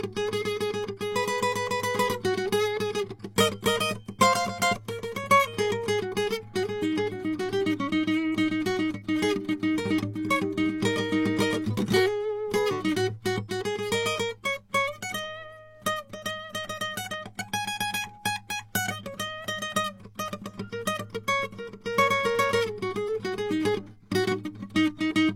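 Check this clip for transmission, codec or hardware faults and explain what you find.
Two kinds of fault turn up in this music clip.

Bit error spikes at 0.43 s and 5.34 s: a flipped bit throws one sample far off, giving a sharp tick, a one-sample waveform spike and a full-height vertical spectrogram line.

CD scratch ticks from 16.96 to 17.48 s: four ticks where damaged data defeated error correction and the player patched over it. Each is under a millisecond, showing as brief waveform notches and spectrogram streaks.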